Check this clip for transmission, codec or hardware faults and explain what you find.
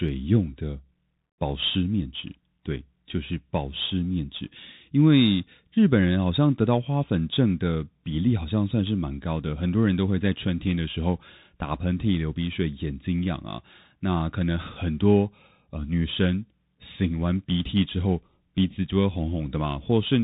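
One fault runs through the entire speech clip: the Bluetooth CVSD headset codec. Each sample is a single up-or-down bit with an adaptive step, consistent with a 64 kbit/s link. Nothing passes above 4 kHz, sibilants turn scratchy, loud high-frequency energy outruns the step and distorts, and a grainy hiss sits underneath.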